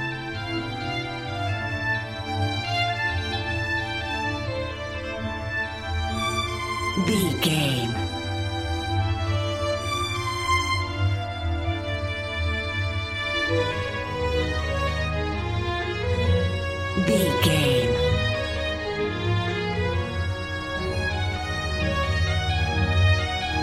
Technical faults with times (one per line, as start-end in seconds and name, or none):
none